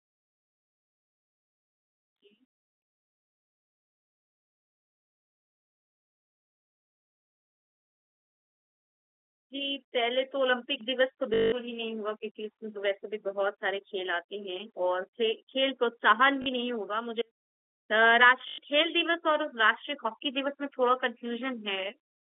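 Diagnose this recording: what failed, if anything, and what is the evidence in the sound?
Network is the culprit here: packet loss with the last packet repeated, at 11.34–11.52 s, 16.42–16.46 s and 18.48–18.58 s. Each gap gets a robotic stutter and a 50 Hz buzz, which fits 20 ms packets being replayed until fresh ones arrive.

Separately, there's an audio dropout to a faint residue from 17.22 to 17.90 s: the speech cuts abruptly, leaving only faint sound about 35 dB below normal level for about 0.68 s. That's likely a break upstream with the path after it still live, since the narrowband G.711 line keeps running.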